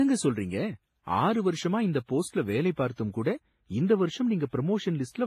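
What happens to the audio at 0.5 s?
At 0.5 s the speech carries stacked codec damage, present across the whole clip. Nothing sounds above 15.2 kHz. Swirly, smeared detail sits under a second layer of grit. This is likely transcoding between lossy codecs, consistent with a low-rate WMA encode re-encoded as Vorbis, which wastes bits reproducing the earlier artefacts.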